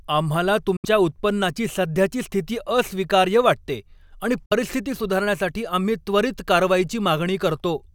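Speech that cuts to silence twice and picks up as if it had kept playing: at 0.76–0.85 s, before "उत्पन्नाची सध्याची स्थिती अस्वीकार्य", and at 4.46–4.52 s, between "स्थिती अस्वीकार्य वाटते आणि" and "सुधारण्यासाठी आम्ही त्वरीत". This is likely a Bluetooth dropout, where late packets never reached the headphones.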